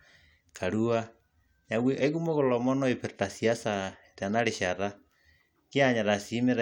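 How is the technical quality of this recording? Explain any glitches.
No technical faults can be heard anywhere in the speech recording. There are no glitches to explain.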